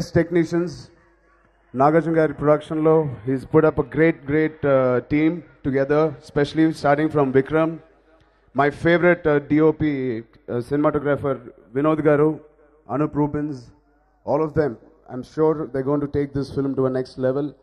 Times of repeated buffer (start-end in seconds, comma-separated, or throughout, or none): none